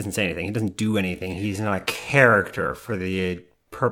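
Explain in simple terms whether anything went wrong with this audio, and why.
A time-stretched section runs from 1.0 s, just after "doesn't do", to the end. The speech suddenly slows to about 0.65 times its pace while the pitch stays the same, likely because software stretched it by repeating short pieces.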